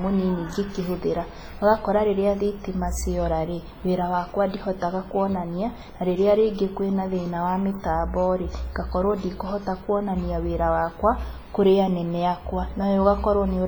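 From start to end the speech carries heavy WMA compression damage, likely from a low-bitrate transform encoder, around 24 kbps. Long transform blocks smear quantisation noise into a ringing, washy haze whose hiss swells and fades with the sound, unlike steady background noise.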